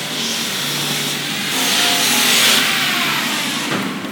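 At 1.51 s, compressed frames are skipped: roughly a fifth of a second of audio vanishes, a jump that fits about seven 26.1 ms frames, leaving a brief smeared blip.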